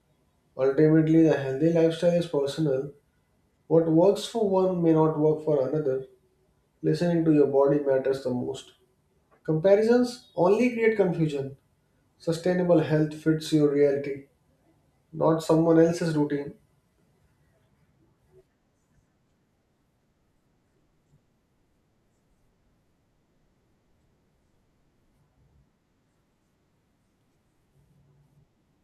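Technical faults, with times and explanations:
Nothing in this speech stood out on listening as a technical problem.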